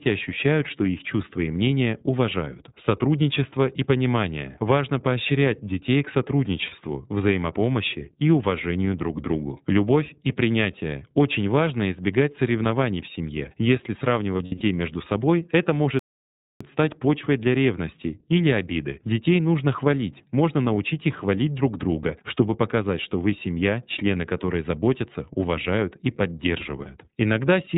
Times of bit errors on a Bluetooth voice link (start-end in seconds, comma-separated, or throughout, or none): none